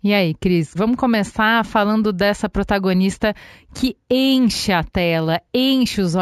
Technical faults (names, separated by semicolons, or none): imaging from linear upsampling